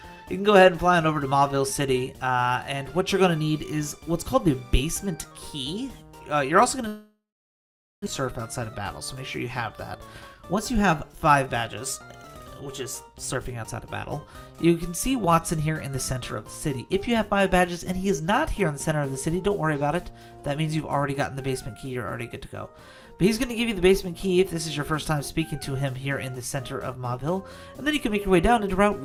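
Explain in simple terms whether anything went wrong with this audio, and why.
A long network dropout runs from 6.87 to 8.08 s. The last sound smears into a fading buzz, then about 0.8 s of silence follows. When the audio resumes, about a second of it is gone, likely because packets stopped arriving over the network.

A jitter buffer speed-up follows from 9.99 to 11.64 s. The receiver had built up extra delay, so it snipped out many tiny slices, roughly 0.15 s in total. The audio plays about 7% faster at the same pitch and sounds hurried.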